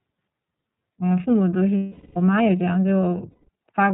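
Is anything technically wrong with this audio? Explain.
Yes. The speech has been through the iLBC codec throughout, with two stretches of lost iLBC frames.

The iLBC codec coding is plainly audible across the whole clip. Each 30 ms frame's excitation is coded independently, which fits the 13.33 kbps mode, so the speech sounds slightly rough and synthetic. A spectrogram shows nothing above 4 kHz, a hard narrowband ceiling.

Lost iLBC frames occur from 1.77 to 2.17 s (about 390 ms, consistent with 13 frames) and from 3.30 to 3.49 s (about 180 ms, six frames). The decoder repeats the last pitch cycle blended with noise, so each gap sounds like a held, buzzy vowel that fades over the longer loss. On a spectrogram this appears as flat, repeating harmonic bands. The waveform shows a looping periodic shape, and the normal voice returns almost immediately afterwards.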